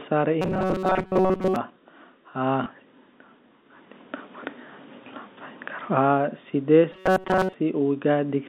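Speech over a G.711 telephone line, band-limited to roughly 200 Hz to 3.7 kHz, is hit twice by robotic sound from repeated short buffers: a rigid metallic buzz at 188 Hz from 0.42 to 1.56 s and again from 6.92 to 7.54 s. It is likely caused by a buffer of about 5.3 ms being replayed in place of most of the incoming audio. At 2.64–2.66 s, packet loss with the last packet repeated fills one 20 ms gap with a copy, giving a small blip.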